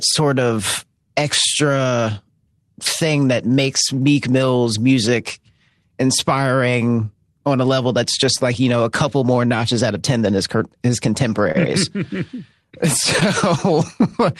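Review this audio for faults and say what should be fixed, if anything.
Clock drift between sender and receiver runs through the whole clip: the speech has a slightly uneven, dragging pace, with tiny timing hiccups at irregular intervals rather than one clear event. The sender's clock runs slow, by about 3 percent, so the receiver's jitter buffer keeps draining and the receiver has to keep stretching sound to avoid running dry. That stretching produces the repeated corrections described below. To prevent it, the receiver should track the measured clock offset and resample smoothly.

Repeated timing corrections run from 0.35 s to 13.74 s. They come across as a faint unsteadiness in tempo, with speech playing at about 98 percent speed and occasional soft hiccups where a short piece is repeated. All the edits lengthen the audio, adding roughly 300 ms in total over the span. They are unevenly spaced, because the receiver inserts each one only when its buffer has drained far enough. 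A drift-compensating resampler would replace these stepwise repeats with a continuous, inaudible rate change.

Scattered short gaps occur in three stretches: 0.11 s to 1.87 s, 8.38 s to 9.39 s, and 13.2 s to 14.14 s. Each stretch has a few brief ticks or smears, the longest around 10 to 15 ms. They add up to roughly 30 ms of patched sound per stretch, only a few percent of it. Packets arrived late or went missing, and the receiver covered each small hole by continuing the previous sound, so nothing is lost outright. A slightly deeper adaptive jitter buffer and forward error correction would reduce these.

A short stall from a late packet occurs at 11.52 s to 11.56 s. One sound is held a moment too long, with a slight buzz or dip before speech resumes. A packet missed its playout time, so the jitter buffer emptied and the receiver stretched the last sound for about 25 ms until the packet arrived. 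It then continued from the same point, so no content is missing, but the delay grew by about 25 ms. This audio passed through an Opus call path with a 12 kHz bandwidth. Giving the jitter buffer more headroom for delay spikes would prevent this stall.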